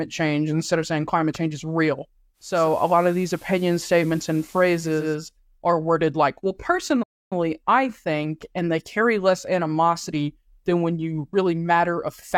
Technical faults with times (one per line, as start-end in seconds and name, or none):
2.33-5.21 digital radio blending to analogue
7.02-7.33 playback stall